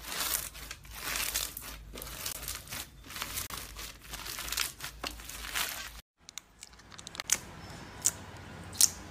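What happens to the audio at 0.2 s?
Nothing goes wrong at 0.2 s; the audio plays through that moment intact, with no dropout, click or distortion.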